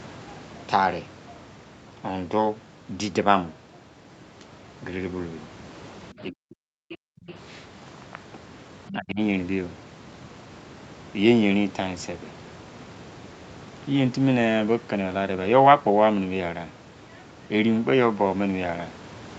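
From 6.12 to 7.29 s the speech is pulled down, by as much as roughly 40 dB, likely speech suppressed in double talk as the echo canceller ducks both talkers. During and just after that span, at 6.89–6.97 s and 7.28–7.34 s, faint scraps of the other side's voice leak through, about 20 dB below the speech, likely residual loudspeaker echo. From 8.89 to 9.20 s a second, shallower case of likely double-talk suppression pulls the speech down by about 25 dB.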